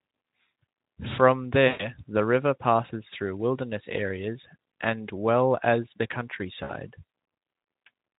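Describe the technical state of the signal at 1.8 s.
Packets were dropped on the VoIP link from about 1.67 to 1.93 s, roughly 120 ms of speech, and the Speex decoder covered the gap with packet loss concealment. It kept rebuilding sound from the last pitch and spectral envelope it had received while turning the level down each frame. At 1.8 s this comes through as a smeared, buzzy tone or coloured noise that dies away, and the speech stays thin for a short while after the packets resume.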